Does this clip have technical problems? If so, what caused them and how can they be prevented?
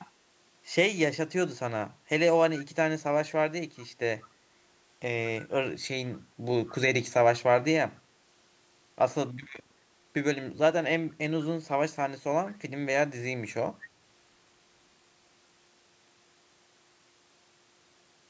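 Yes. An echo canceller on the side playing the call through a loudspeaker likely failed to remove all of what its microphone picked up, causing echo leak. Short, faint copies of the speech return about 194 ms late, well below the speech level, at 4.24–4.28, 5.39–5.47, 6.66–6.75 and 11.09–11.13 s. A headset or better-tuned echo cancellation on that side would prevent it.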